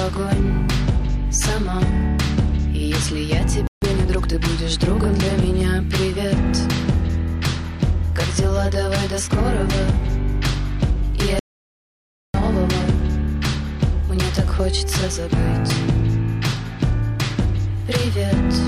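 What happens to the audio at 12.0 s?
At 12.0 s the sound has cut out completely: from 11.39 s to 12.34 s, a span of about 0.95 s, there is dead digital silence with no room tone or background underneath, and the audio then resumes abruptly mid-flow. This is an audio dropout to silence. The likely cause is that the input signal was briefly lost, through a disconnected device, a failed link or a mute, while recording continued writing silence, so whatever occurred in that gap is simply missing.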